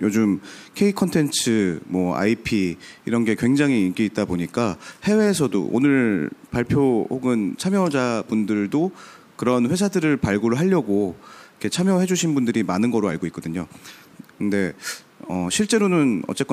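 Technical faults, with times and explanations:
No technical faults detected.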